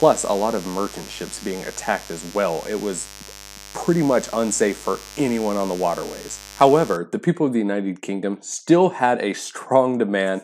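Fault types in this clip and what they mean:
Mains buzz: switching spikes from a dimmer, rectifier or unshielded run are getting into the signal path twice per cycle of the 50 Hz supply. That puts a dense stack of 50 Hz harmonics reaching up into the kilohertz range. Here it sits roughly 20 dB below the wanted sound as a steady, raspy buzz running from the start of the clip to about 6.97 s, where it stops.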